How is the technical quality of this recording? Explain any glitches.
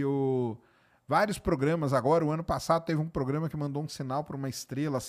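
No glitches or technical faults are audible anywhere here.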